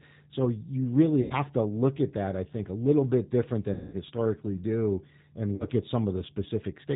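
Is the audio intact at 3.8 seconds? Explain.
No. VoIP packet loss concealed by the speech codec hits from 3.74 to 3.96 s, right after "little bit different". About 190 ms of packets never arrived, so the decoder kept extending its last pitch and vocal tract filter with falling gain. The sound is stretched out and fades, and because each frame builds on the one before, it stays weak for a short stretch after packets resume.

The G.729 codec also runs across this moment at 8 kbit/s. It rebuilds the sound from a filter, a pitch predictor and a few pulses per frame and drops everything above 4 kHz, so this span, like the rest of the audio, is plainly rough and synthetic.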